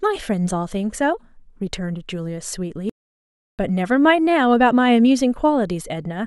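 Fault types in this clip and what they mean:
Audio dropout to silence: the speech stops dead at 2.89 s and comes back at 3.59 s, leaving about 0.69 s of silence with no room tone, likely because the input link dropped while recording carried on, so whatever was said there is lost.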